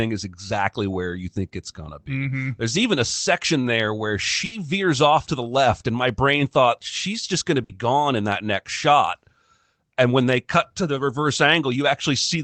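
Speech with two bursts of packet loss, at 4.45 to 4.55 s after "a section there where" and at 7.64 to 7.75 s after "thought she's just gonna". In each, the receiver stretches the last sound into a fading buzz or hiss for about 60 to 70 ms, then resumes with about 60 ms of speech missing.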